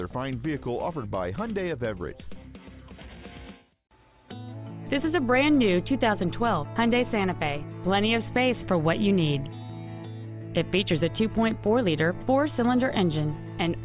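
Nothing stood out on listening.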